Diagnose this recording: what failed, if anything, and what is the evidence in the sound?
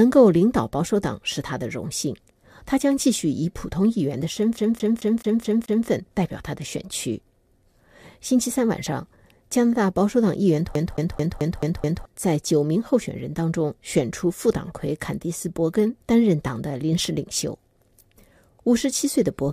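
Playback stage: CD stuck on one turn. At 4.57–5.88 s and 10.75–12.05 s, a 217 ms slice repeats six times. A scratch keeps throwing the laser back.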